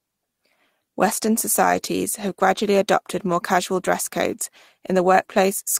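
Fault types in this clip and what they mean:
Lost packet rebuilt from error correction: a few packets went missing, and the decoder filled them from the low-bitrate backup copy carried in the next packet, so there's no gap, just rougher, noisier speech. Around 1.69 to 1.87 s, before "have gradually adopted more", about 100 ms is rebuilt across five separate packets. There's a brief 20 ms patch at 4.31 s, right after "adopted more casual dress".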